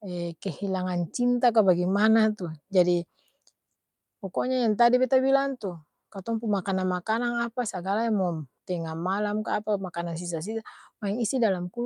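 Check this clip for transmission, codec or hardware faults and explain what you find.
One fault stands out: a call bitrate drop from 5.47 to 7.93 s, starting just before "yang mo'm tenga". The speech turns coarser and rougher, consistent with the encoder rate being cut from 64 to 28 kbps as the bandwidth estimate fell. It bottoms out for about 1.6 s, then clears. Packet loss would sound different: it leaves brief gaps or smeared bursts, not a sustained, even degradation.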